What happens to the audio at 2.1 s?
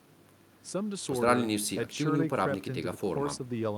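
Nothing goes wrong at 2.1 s; the speech carries on intact through that moment, with no dropout, click or distortion to be heard.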